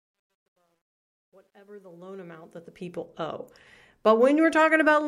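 A speech clip whose opening, from 0.0 to about 3.05 s, sounds gritty and grainy, worst over the first 1.68 s, where the level is lowest. This is truncation distortion on a fade: the digital gain stage that shaped this quiet stretch keeps only about 11 bits and adds no dither. At such low levels the waveform is rounded onto a handful of coarse steps, so the signal turns into squared-off fragments.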